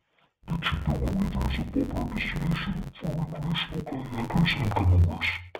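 From start to finish the speech carries an interleaved audio read as planar fault. Each block of about 10.9 ms stores left and right samples alternately, but the reader treats the first half as left and the second half as right, so both channels play their halves at half speed within every block. Because the blocks are so short, no clear octave drop emerges. The speech sounds dull and robotic, with a buzz at the 91.9 Hz block rate.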